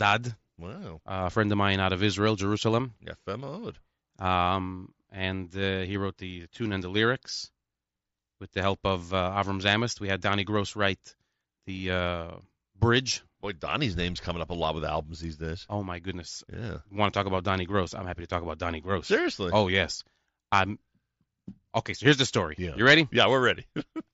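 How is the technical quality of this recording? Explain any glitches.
No faults are audible; the speech comes over a wideband Bluetooth headset link using the mSBC codec, so bandwidth tops out at 8 kHz and louder syllables carry that codec's light grain.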